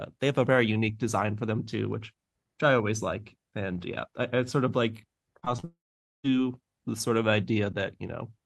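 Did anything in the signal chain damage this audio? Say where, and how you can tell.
Yes, the damage happens on the network leg, right around 5.4 s. From 5.39 to 5.64 s there's repeated packet loss, with the robotic sound you'd expect. Four short holes land in quick succession, the longest about 34 ms. Each one is papered over by stretching the last bit of sound, so roughly a third of that quarter-second is synthetic fill. That makes it choppy rather than cleanly cut.

Straight after, from 5.64 to 6.26 s, it turns into a long network dropout. About 0.6 s of audio never gets played. The receiver smears the last sound out as a fading buzz for a moment, then it's essentially silence for most of that stretch before the sound picks up again with the missing chunk simply gone. It's most likely a burst of lost or badly late packets rather than anything upstream of the sender.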